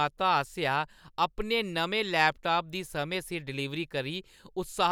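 No technical faults are audible.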